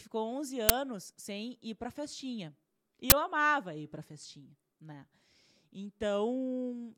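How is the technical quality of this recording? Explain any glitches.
Two loud glitches spoil this speech recording. Both are uninitialised buffer faults: at 0.69 s, just before "sem ir para festinha", and from 3.10 to 3.12 s, between "ir para festinha e" and "amava ir para festinha". In each case a block of audio, about 10 ms and then 20 ms long, was played before anything had been written into it, so whatever leftover memory sat there came out as samples. You hear a short, loud crack or burst of digital noise.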